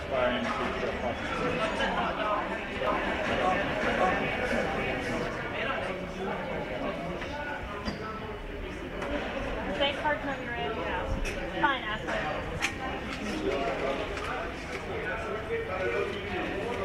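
A doubled audio track runs from 2.87 to 5.29 s. Over that stretch a second, full-band copy of the sound trails the first by about half a second at roughly the same loudness, so every event is heard twice with no decay or room colour on the repeat. It cuts in and out abruptly at both ends. The likely cause is the same signal being captured again by a slower path and mixed back in out of step.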